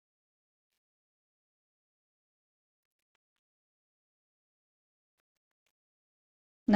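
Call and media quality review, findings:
Bluetooth stutter, 0.76–0.78 s: brief repeat of a 23 ms slice, then audio resumes further on. Receiver replayed its last buffer after packets failed to arrive in time. The 23 ms length fits a single lost packet on the wireless link.

Audio missing between chunks, 5.66 s: abrupt skip with the two sides butted together, no silence, around 50 ms of sound gone. Likely caused by the recorder or processor dropping samples while closing one 2.0 s chunk and opening the next.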